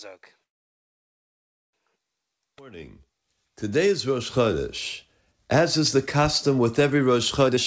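From 0.44 to 1.75 s the speech stops for about 1.3 s, almost all of it dead silence. The likely cause is a call audio freeze: packets stalled in transit, the jitter buffer ran dry, and the receiver filled the wait. Unlike a dropout, nothing is lost. When the packets arrive the speech resumes exactly where it broke off, so the stall only adds delay and pushes everything after it about 1.3 s later.

At 7.47 to 7.57 s there is a brief jitter buffer speed-up. The buffer held more audio than its target, so the receiver cut out short pitch-period slices in quick succession, removing roughly 70 ms. For that tenth of a second the speech runs at about 166% speed and sounds clipped and hurried. The pitch stays put, which separates it from a resampling or tape-speed error where the voice would rise. Throughout, the G.722 call path leaves nothing above 8 kHz.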